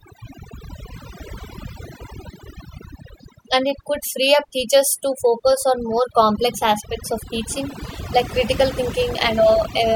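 Overdone noise removal runs through the whole clip. The noise reduction was set far too aggressively, so any frequency band that sits close to its estimate of the background noise gets pulled down hard or shut off entirely, and the quieter parts of the speech are removed along with it. The gaps between phrases fall to near silence scattered with twinkling specks.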